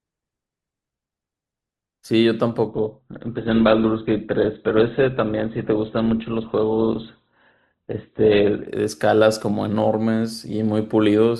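It's a speech clip, and from 2.68 s to 8.68 s it drops abruptly into a much rougher sound with no gap on either side: classic adaptive stream at a lower bitrate, where the player switched to a cheaper rendition while the connection sagged. Everything above about 4.2 kHz vanishes, sibilants go dull, and codec artefacts climb. It sounds like a step down from a comfortable Opus rate to something around 12 kbit/s, then it snaps back.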